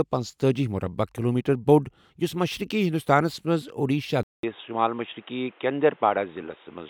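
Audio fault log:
4.23 to 6.90 s, input switched to a poorer device: after a 200 ms silence the speech turns dull and boxy and stays that way to the end, with nothing above 3.8 kHz and a faint new background noise sitting well beneath the voice, while loudness stays roughly unchanged. The likely cause is the recording input changing mid-clip to another microphone or a headset's call profile, whose narrower band and own noise floor replace the original pickup's tone.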